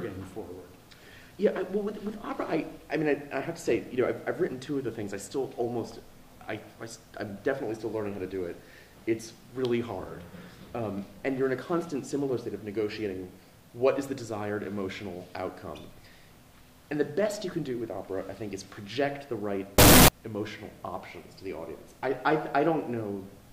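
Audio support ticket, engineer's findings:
Harsh, near-square burst at a fixed, high level, 19.78–20.08 s; pitch still trackable. Likely float read as integer: 32-bit float samples read as 32-bit integer. Unlike clipping, the burst reaches the same level however quiet the source.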